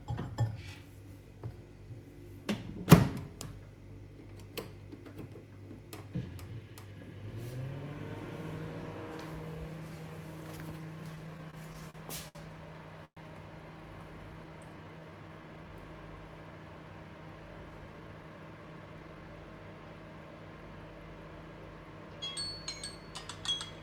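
The clip holds everyday sounds with four timing faults. From 11.15 to 12.37 s there are repeated stalls (stutter). The sound halts seven times, each for at most 67 ms, adding about 175 ms in all. Late packets kept draining the jitter buffer, and the receiver stretched the last sound to cover each wait. Nothing is lost, but the sound drags. At 13.05 to 13.19 s comes a call audio freeze. The sound is held for 117 ms, fading to silence for the last 80 ms before playback resumes where it stopped. The likely cause is packets held up in transit, emptying the buffer. From 14.33 to 15.82 s there is a jitter buffer slow-down. The sound plays at 90 percent speed with unchanged pitch, stretching by 152 ms. The receiver repeated tiny pieces to rebuild its reserve, so sounds are drawn out. From 17.64 to 19.37 s comes a jitter buffer speed-up. The sound runs at 114 percent speed, again at the same pitch, and about 0.3 s is cut. 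The buffer held too much audio, so short pieces were dropped and the sound feels hurried.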